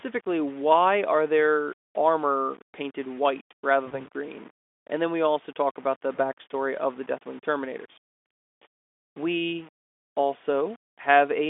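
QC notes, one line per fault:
Throughout: low bit depth without dither, likely rounding to about 7 bits; error tracks the signal, quantisation noise roughly 25 dB below the speech, broadband speckle on spectrogram.
3.85 to 4.03 s and 6.15 to 6.19 s: VoIP packet loss concealed by the speech codec, one 20 ms frame each, after "their armor painted white" and "also talk about the"; decoder extrapolates then recovers, smeared harmonics and dipping envelope on waveform.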